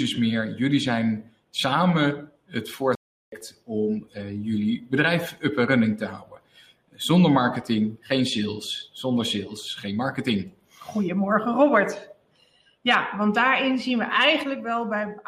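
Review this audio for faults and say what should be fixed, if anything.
From 2.95 s to 3.41 s the sound drops abruptly into dead silence for about 0.46 s, a corrupt frame muted fault. Flipped bits damaged compressed frames, the decoder rejected them, and the player filled the gap with silence. The gap length fits roughly five consecutive codec frames. Timing is preserved, so the audio resumes on schedule. A waveform shows a flat near-silent stretch with sheer edges, and a spectrogram shows a fully blank vertical band across all frequencies. To prevent it, protect the stream with error checking and forward error correction, or use packet-loss concealment that interpolates missing frames instead of inserting silence.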